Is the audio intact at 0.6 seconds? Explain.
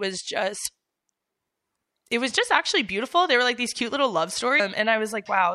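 No. From 0.62 to 0.66 s there is damaged data in the compressed stream: corrupted frames throw the decoder out of sync, producing a brief chirp, squawk, click or short hole in the speech.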